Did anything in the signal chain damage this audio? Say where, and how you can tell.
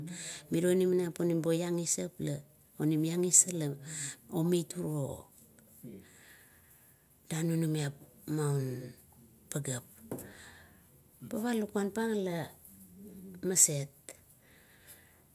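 No, I can't place damage at any stage of the chain in this speech recording.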